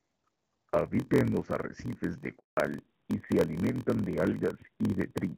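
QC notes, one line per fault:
Throughout: block size mismatch (padded). A steady 43.1 Hz buzz and speech running at 0.938 times normal speed. Zero-filled gaps in each block fit a 1024-sample read.
2.38–2.57 s: handover gap. Speech fades and stops for 180 ms after "en los arrecifes de", as no frames arrived during the network switch.
2.57 s to end: fallback to narrowband. Speech turns duller and rougher with nothing above 4 kHz, which points to a drop from AMR-WB 12.65 kbit/s to AMR-NB 7.4 kbit/s.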